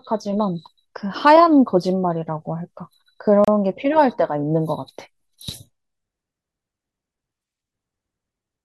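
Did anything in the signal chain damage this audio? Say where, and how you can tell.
Yes. There is a gap at a join of encoded pieces, at the codec stage. At 3.45 s the speech drops to silence for about 31 ms, until 3.48 s. The edges are smeared by the codec. The speech then resumes exactly where it stopped. Separately encoded segments were joined without trimming encoder delay and end padding.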